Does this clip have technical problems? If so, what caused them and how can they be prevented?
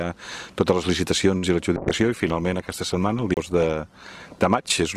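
Yes. At 1.37 s a packet arrived late and the jitter buffer ran dry, a short stall from a late packet: the last sound is stretched for about 55 ms, nothing lost, but it lingers with a slight buzz or dip. Prevent it with a slightly deeper adaptive jitter buffer.

From 1.78 s to the end, the call bitrate dropped from 128 to 16 kbps after the bandwidth estimate fell, so the encoder coded coarsely and the sound turns muffled and watery, worst for about 2.2 s. Prevent it with steadier network capacity or less competing traffic.

At 3.34 s a CD skip occurs: the laser jumped tracks, giving a brief mute of a few tens of milliseconds with a tick and a jump in the sound. Prevent it by isolating the player from knocks and using clean, undamaged discs.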